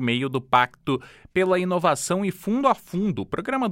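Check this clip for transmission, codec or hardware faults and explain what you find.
No transmission, codec or hardware faults are audible anywhere in the clip.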